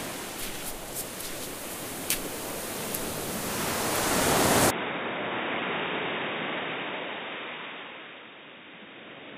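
An everyday-sound recording whose character changes abruptly at 4.70 s and stays changed to the end: everything above 3.8 kHz disappears, the level falls by roughly 10 dB, and a new background noise appears about 35 dB under the sound. There is no gap at the change. This is likely an input switched to a poorer device. A plain low-pass filter or codec bandwidth drop would only dull the top, not also shift the level and noise floor together.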